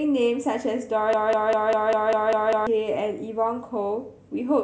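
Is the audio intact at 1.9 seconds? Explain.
No, at 1.9 s a 199 ms fragment repeats back to back, eight times from 1.13 to 2.67 s: a broken-record loop, likely from a stalled player resending its last buffer.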